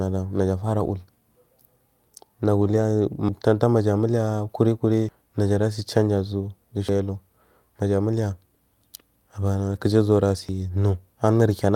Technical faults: lost packet rebuilt from error correction; audio missing between chunks

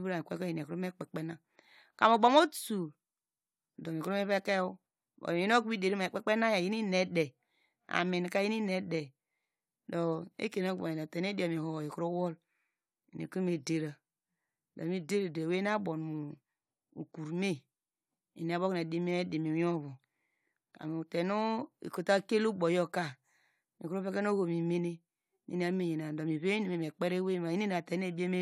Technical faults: none

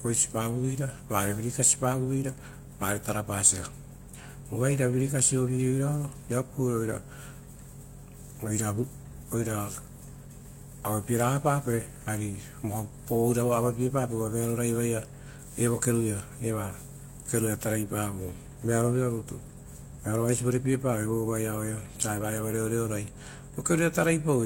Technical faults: transcoding between lossy codecs

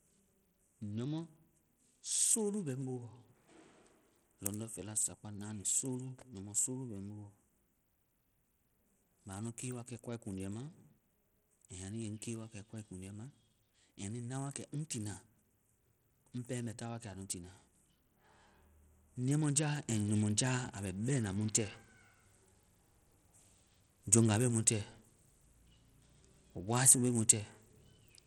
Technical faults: Bluetooth SBC compression

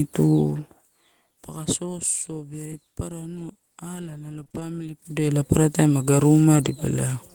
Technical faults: lost packet rebuilt from error correction; repeated packet loss (robotic sound)

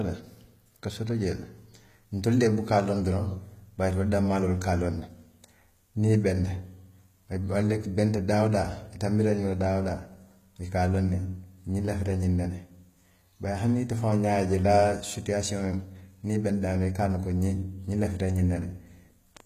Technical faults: HE-AAC compression

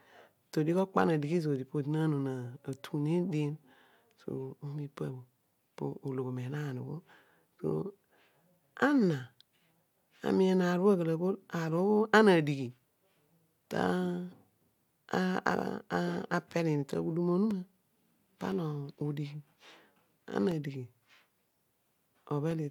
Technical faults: periodic USB or driver dropouts

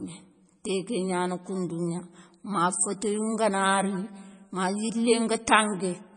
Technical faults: MP3 compression

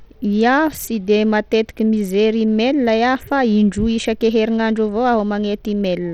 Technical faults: Bluetooth SBC compression

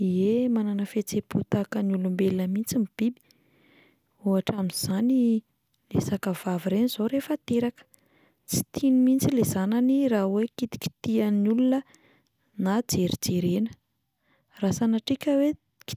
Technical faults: none

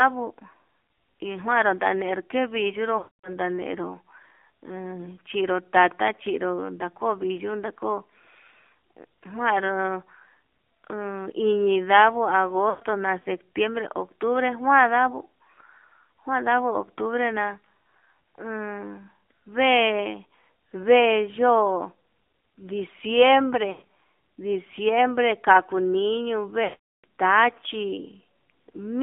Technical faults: AMR narrowband mobile codec; lost AMR speech frames

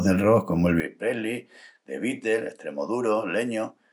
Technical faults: input switched to a poorer device

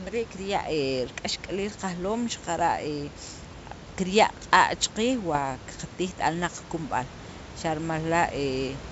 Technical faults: bit errors on an ADPCM link

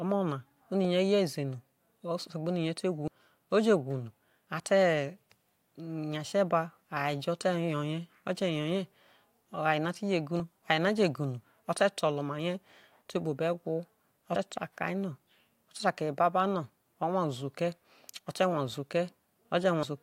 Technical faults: compressed frames skipped

